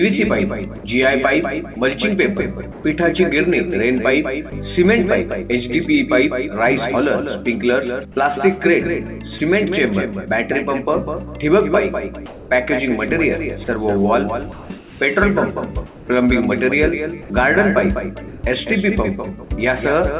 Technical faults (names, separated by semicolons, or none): sound chopped by the voice detector; sound dropped by the voice detector